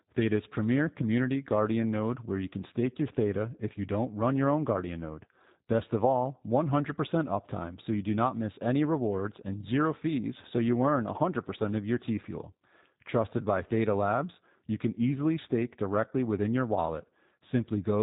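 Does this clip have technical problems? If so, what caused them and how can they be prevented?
Yes. Throughout, G.729 codec compression makes the speech plainly rough and synthetic, consistent with 8 kbit/s; a spectrogram shows nothing above 4 kHz. Prevent this by using a wideband codec at a higher bitrate.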